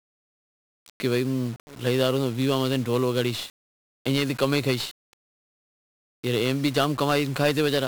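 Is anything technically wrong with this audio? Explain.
Yes, the speech carries 1-bit DFPWM compression throughout. Each sample nudges a tracking level up or down, leaving harsh broadband fuzz and crackle that buries the treble, consistent with roughly 48 kbps. A spectrogram shows an even noise floor smeared across all frequencies.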